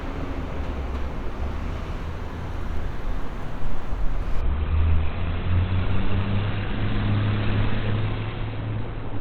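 An everyday sound recording that switches to an adaptive stream at a lower bitrate from 4.41 s to the end. The treble abruptly vanishes above 4.3 kHz with no gap, and artefacts rise, consistent with a drop to 16 kbit/s Opus. On a spectrogram, the upper bands cut off sharply at that moment.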